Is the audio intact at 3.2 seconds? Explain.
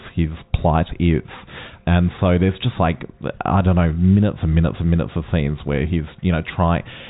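Yes, the speech is intact at 3.2 seconds, with no dropout, click or other fault at that point.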